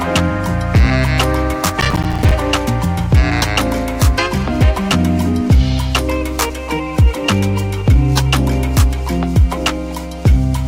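From 1.80 to 2.32 s there is a burst of processor overload crackle. The processor misses around twenty buffer deadlines in quick succession, and each miss drops out as a hard-edged silent gap, which fits buffers of roughly 5 ms, so the sound tears and crackles until the load eases.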